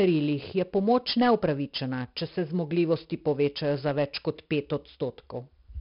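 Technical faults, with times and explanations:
Throughout, 4-bit ADPCM compression: the speech carries a heavy, gritty hiss that swells and fades with its loudness and turns crunchy on sharp onsets, and nothing is heard above 5.3 kHz, so the sound is dull and muffled. Each sample is coded as a coarse 4-bit step away from a predicted value. The step size adapts too slowly for sudden attacks, leaving noise that tracks the level and distortion on the edges. This fits a bitrate around 44 kbps.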